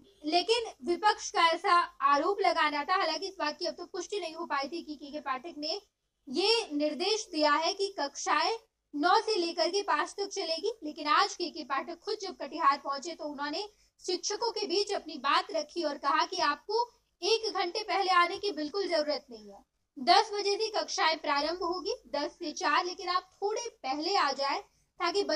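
Across the whole recording the sound is rough and slightly doubled, with a combed colouring that never changes. This is channel delay (comb filtering): one channel runs roughly 20 ms behind the other, and when the two are summed to mono, content shared by both cancels at evenly spaced frequencies. The first notch falls low, at around 30 Hz, and the rest repeat at close, regular intervals up the spectrum, which produces the fixed, combed character.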